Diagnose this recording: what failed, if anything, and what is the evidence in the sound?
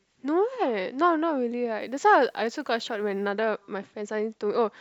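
Between 1.80 and 3.30 s the speech turns grainy, with a rough distortion that rises and falls with the signal and is worst on the quieter passages, where low-level detail breaks up or sputters. The fault is likely low bit depth without dither at a sample-format conversion: rounding to about 10 bits with no dither leaves an error that tracks the waveform, sitting only about 45 dB below the signal.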